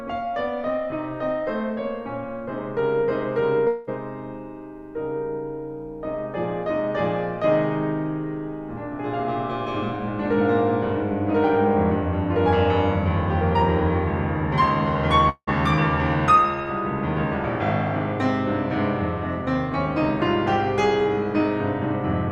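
At 3.67–3.89 s and 15.29–15.49 s the music smears into a fading buzz, briefly silent the second time, then resumes with about 0.2 s lost: likely a long network dropout.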